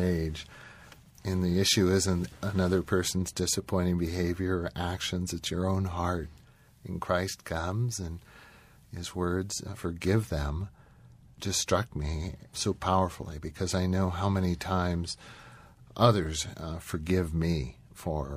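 Just after "it's your own heart", at 6.42 s, the receiver shows digital radio blending to analogue: it loses the digital stream and cross-fades over 272 ms to the FM broadcast. Level drops about 3 dB and hiss rises to roughly 35 dB below the speech, until the return at 9.91 s.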